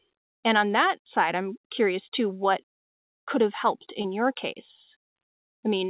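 At 4.02 s there is a short concealed packet loss lasting about 20 ms. The receiver patched the gap by extending the preceding sound, heard as a brief smear. The speech passed through a call path with nothing above 4 kHz.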